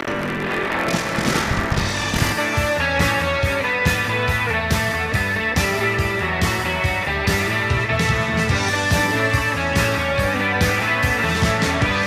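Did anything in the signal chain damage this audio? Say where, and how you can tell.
Yes, at the driver or buffer stage: buffer tearing from 0.0 to 2.32 s, heard as a 43.1 Hz robotic buzz, which fits a 1024-sample buffer. Most of each period replays audio from about 70 ms earlier, so the waveform shows hard joins and the spectrogram shows evenly spaced vertical stripes.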